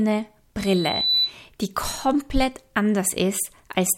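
Loudspeaker feedback squeal runs from 0.59 s to 1.35 s, ending just before "die komplett". A microphone was hearing the loudspeaker it fed, and at 4 kHz the gain around that loop rose above one, so the tone kept feeding itself. It swells over roughly half a second into a piercing whistle that sits a few decibels above the speech.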